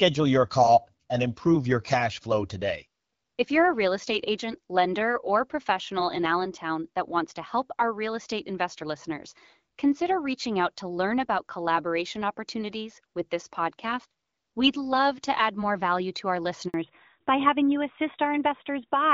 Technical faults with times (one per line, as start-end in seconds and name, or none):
16.68-16.74 handover gap
16.74-19.14 fallback to narrowband